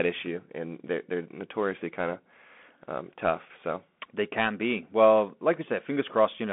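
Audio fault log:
Throughout: Bluetooth CVSD headset codec. The speech is squeezed into a narrow telephone band of roughly 200 Hz to 3.5 kHz, with nothing above 3.8 kHz, and the one-bit up/down slope coding, which fits a 64 kbps stream, plainly cannot keep pace with loud high sounds, so s sounds turn scratchy over a granular hiss. A spectrogram shows a hard ceiling near 3.8 kHz with an empty top; the waveform looks stepped and grainy.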